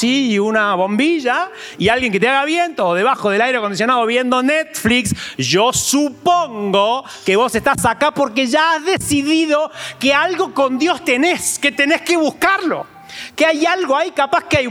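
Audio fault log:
No fault in the audio fault log.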